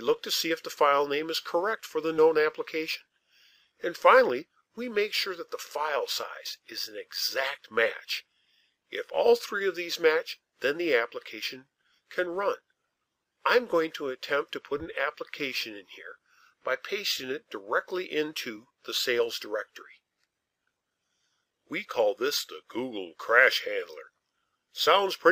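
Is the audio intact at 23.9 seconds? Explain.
Yes, the audio is intact at 23.9 seconds, with no dropout, click, distortion or other fault audible at that point.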